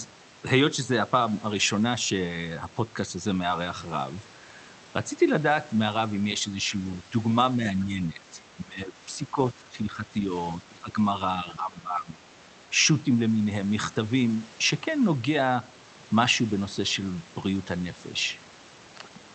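The speech dips at 7.94 to 8.22, 8.55 to 9.01, 9.17 to 10.32, 10.56 to 10.97 and 11.44 to 12.23 s. Drops reach about 10 to 20 dB, deepest at 8.55 s. This is likely speech suppressed in double talk. The echo canceller mistook the talker for loudspeaker echo and turned both down.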